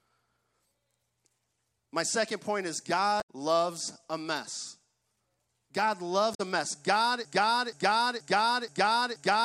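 At 3.18 to 3.29 s and again at 6.31 to 6.41 s, the speech briefly breaks up. That is damaged data in a compressed stream: the decoder misreads corrupt frames and resyncs. From 7.25 s to the end, a 0.48 s fragment repeats five times. This broken-record loop likely comes from a stalled stream resending its last buffer.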